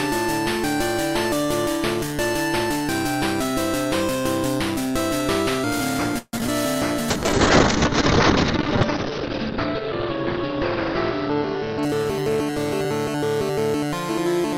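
The audio has three transport-related faults. From 6.18 to 6.49 s there is repeated packet loss, producing a robotic sound. Five separate holes fall in that span. Concealment fills about 186 ms by extending the preceding sound, the longest patch being 146 ms, so roughly 61% of the stretch is synthetic. Another 40 ms simply drops out. The result is choppy, robotic texture with small pieces missing. At 7.11 s a call bitrate drop begins and lasts until 13.06 s. The encoder falls from a full-quality rate, which fits around 128 kbps, to what sounds like about 8 kbps, and it sits at that floor for about 1.3 s. The audio bandwidth collapses from 20 kHz to 6 kHz as Opus discards the upper band, so the sound turns muffled and coarse until the rate climbs back. Overlapping the end of that, from 11.11 to 13.10 s, there is a jitter buffer speed-up. The receiver had accumulated excess delay and trimmed it by repeatedly cutting out short pitch-period segments, roughly 150 ms in total. 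Playback runs about 7% fast at unchanged pitch, so the passage sounds slightly hurried.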